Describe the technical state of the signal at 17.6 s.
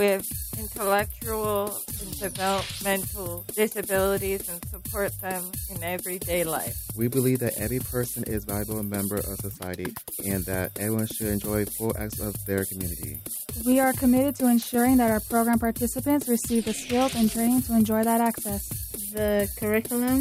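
At 17.6 s the signal is intact, with no dropout, distortion, glitch or other technical fault to be heard at that point.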